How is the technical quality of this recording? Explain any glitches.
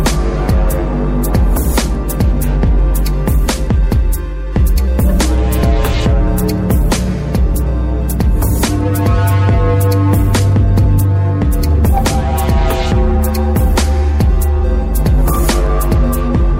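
The recording has one technical fault, sample clock jitter, running from 12.48 s to the end.

Here the converter's clock wanders by a fraction of a microsecond, so each sample is captured slightly early or late at random. Where the waveform changes fastest, those timing slips turn into amplitude errors, roughly 50 dB below the signal. The result is a faint hiss or grainy roughness that rides on the louder, brighter moments and drops away when the sound goes quiet.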